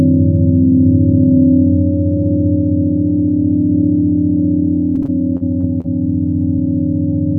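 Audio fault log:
4.95–5.86 s, repeated packet loss (robotic sound): about six short holes, the longest near 39 ms, are patched by stretching the preceding sound, covering roughly 15% of this stretch. The rapid repetition of these patches gives a choppy texture with pieces missing, unlike a single clean dropout.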